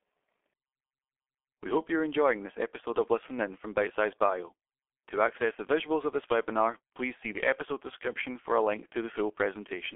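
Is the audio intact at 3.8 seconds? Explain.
No. At 3.8 s, as throughout, the speech passes through a G.723.1 codec, coding 30 ms frames at a rate that fits about 6 kbit/s and discarding everything above 3.7 kHz. The heavy damage makes the voice muffled and hoarse, with smeared consonants.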